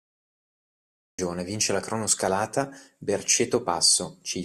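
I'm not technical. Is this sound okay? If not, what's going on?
No. This is a cut-off start. For the first 1.19 seconds there is complete digital silence, and at 1.19 s the speech appears suddenly, already partway through a sound, with no natural beginning. The recording started late and missed the opening. A natural pause before someone talks would have faint room noise and a clean start. A dropout is a gap in the middle of audio that was already running.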